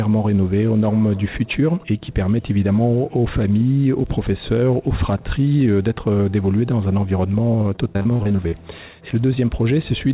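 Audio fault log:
7.76 to 8.54 s: repeated packet loss (robotic sound). About ten short holes open up in under a second, and none is longer than 40 ms. Each is bridged by stretching the sound heard just before it. Roughly a quarter of the stretch is filled this way. The patches keep coming, and the next gap arrives quickly, so the audio turns choppy, with pieces missing. The call path is band-limited, with nothing above 4 kHz.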